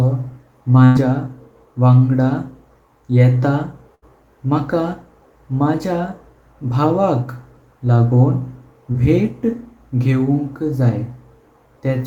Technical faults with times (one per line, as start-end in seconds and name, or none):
0.85-0.97 burst of packet loss
3.95-4.04 burst of packet loss
8.92-8.96 short concealed packet loss